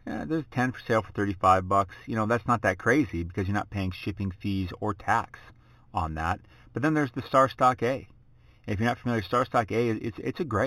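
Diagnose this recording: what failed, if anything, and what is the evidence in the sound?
The sample-rate conversion failed: imaging from linear upsampling, present throughout this speech. The 8 kHz audio was raised to 44.1 kHz by straight-line interpolation, leaving a dulled top end and a mirrored image from 4 kHz to 8 kHz, roughly 30 dB down, heard as faint metallic shimmer on sibilants. Unlike aliasing, the spurious energy sits above the original band rather than folding into it.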